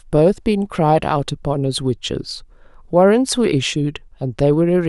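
From 3.16 to 4.67 s this speech clip turns slightly dull, with the very top of the spectrum rolled away. That is channel delay (comb filtering): one channel runs about one sample late, some 0.02 ms, so the mono sum cancels near 20 kHz.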